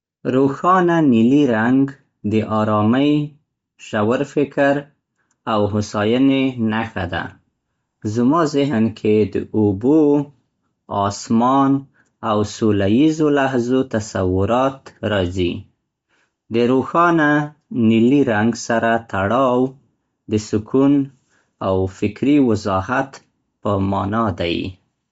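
Throughout the speech, nothing sounds above 7.7 kHz, and the upper band turns breathy and grainy. Likely Bluetooth LC3 compression, at a low bitrate near 32 kbps.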